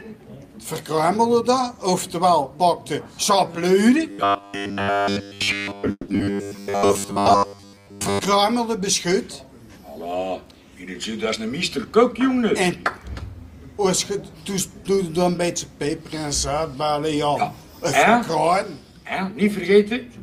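From 4.11 to 8.21 s the sound turns into robotic sound from repeated short buffers, a rigid metallic buzz at 100 Hz. That points to a 10 ms stretch being replayed over and over, likely because fresh audio arrived too seldom, with most of the real material in that span skipped in favour of the repeats.

Inside that stretch, at 5.91 to 6.10 s, there's what is likely a call audio freeze. The receiver ran dry and filled about 170 ms by extending the last sound, which tails off into roughly 40 ms of silence. Nothing is lost; the audio just resumes late, about 170 ms behind where it was.

Right after, at 6.18 to 6.21 s, comes a skip ahead. Roughly 70 ms of audio is dropped and the two sides are butted together with only a tiny 10 ms fill, which claws back about that much of the delay the freeze added.

Then from 6.60 to 7.06 s there's a jitter buffer slow-down. The receiver repeated small pitch-period chunks to rebuild its reserve, adding 64 ms, so the sound plays at 88% speed at unchanged pitch and comes across drawn out.

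Later, 11.29 to 12.91 s, the opposite happens, a jitter buffer speed-up. With too much audio queued, the receiver trimmed roughly 150 ms in small pieces, so the sound runs at 110% speed at the same pitch and feels hurried.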